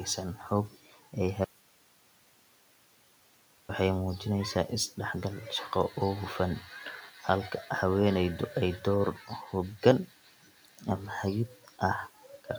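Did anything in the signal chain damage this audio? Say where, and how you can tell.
Yes. From 1.45 to 3.69 s the speech vanishes abruptly for about 2.2 s, leaving only hiss far below the normal level, then resumes mid-flow. Because the path stayed live, the audio dropout to a faint residue is likely a transport or buffer break upstream of playback.

In call processing, the noise suppressor cut the speech twice: at 7.08 to 7.24 s and 9.17 to 9.30 s, short stretches are pulled down by about 8 dB. The suppressor mistook those soft speech sounds for the room noise sitting about 26 dB below, so they sound swallowed.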